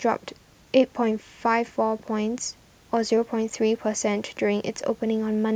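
No technical fault can be heard anywhere in this speech recording, and the signal carries through its whole length without any dropout, distortion, glitch or other defect.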